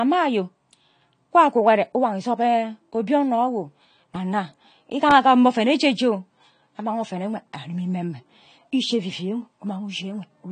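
AAC compression runs through the whole speech recording, and the damage is plainly audible. Nothing is present above 10 kHz, so the top of the spectrum is cut off and the speech sounds dull. The codec is likely AAC-LC at a low rate, with the character fitting about 32 kbps. At that rate the encoder quantises its frequency lines coarsely against its hearing model. It drops the highest band and leaves the rest thin, which smears the detail and gives sibilants a fizzy, warbling edge.

A repeated buffer occurs at 5.11 s, just before "agam mma oven oje". New audio failed to reach the output in time, so the last block was played once more. The repeated segment is only about 1.3 ms long, which fits a 64-sample buffer. Because the repeat is that short, it is heard as a click or brief buzz at a hard join rather than a stutter. A sliver of audio, well under 2 ms, is lost.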